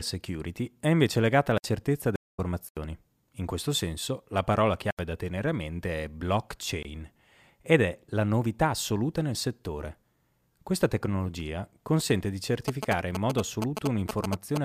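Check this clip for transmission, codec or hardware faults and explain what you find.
Three kinds of fault affect this speech: blocks of digital silence, a stream reconnect and GSM signalling bursts.

Blocks of digital silence occur at 1.58–1.64 s after "è invece legata alla", 2.69–2.77 s, 4.91–4.99 s between "questo senso la parola" and "da tenere a mente", and 6.83–6.85 s. Output buffers likely went unfilled and were zeroed, so each 20–80 ms hole cuts in and out abruptly.

A stream reconnect occurs at 2.16–2.40 s. The connection dropped for 222 ms, then a fresh decoder resumed the audio about a fifth of a second further on, so the speech jumps ahead.

GSM signalling bursts occur at 12.68–14.58 s, after "tecnologia consente di". A nearby 2G phone's radio bursts were rectified by the circuitry, producing galloping ticks and 217 Hz buzzing about as loud as the speech.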